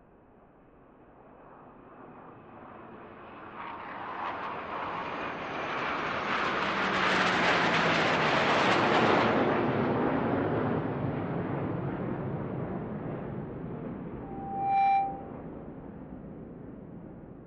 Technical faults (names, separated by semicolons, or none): loudspeaker feedback squeal